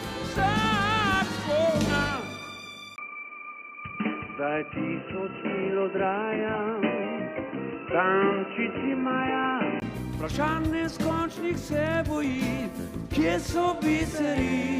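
At 2.96 s the sound drops out for about 20 ms. It returns dull and boxy, with nothing above 3 kHz. The level shifts by a few decibels, and a new, faint noise floor appears. The likely cause is an input switched to a poorer device. Full clarity returns at 9.82 s.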